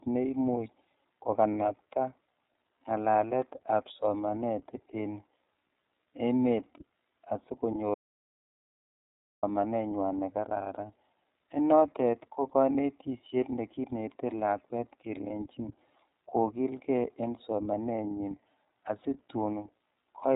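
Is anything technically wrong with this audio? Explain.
Yes, two faults.

The whole clip passes through the iLBC codec, a narrowband VoIP coder that encodes each 30 ms frame's excitation independently, and the framing and rate fit the 13.33 kbps mode. Everything above about 3.8 kHz is gone, so the speech sounds muffled and telephone-like, and the coding damage is plainly audible as a rough, slightly synthetic grain on the voice.

From 7.94 s to 9.43 s there is an audio dropout to silence lasting about 1.48 s. The input was most likely lost, through a disconnected device, a broken link or an accidental mute, while recording carried on writing silence. The speech cuts off abruptly, the gap is silent with no room tone at all, and whatever was said during it is lost before the audio resumes mid-flow.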